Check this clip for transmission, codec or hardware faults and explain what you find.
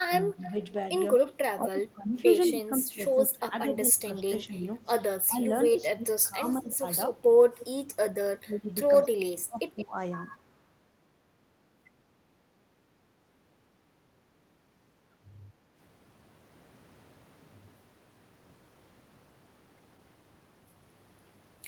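The clip has echo-canceller trouble: speech suppressed in double talk, echo leak, and a gated background.

Speech suppressed in double talk: from 0.07 to 0.53 s and again from 1.57 to 9.95 s, the speech dips by up to about 15 dB and then about 25 dB, for roughly four seconds in all. The canceller likely confused overlapping talk with echo and ducked everything.

Echo leak: delayed copies come through at 0.41 to 1.32 s (197 ms behind, about 20 dB down), then at 7.59 to 7.64 s and 8.93 to 10.36 s (173 ms, the last only about 10 dB down). The canceller likely left some of the loudspeaker signal in the microphone feed.

Background gated by the echo canceller: between 13.07 and 15.65 s the room tone drops by up to about 9 dB for around two seconds while the canceller clamps the microphone.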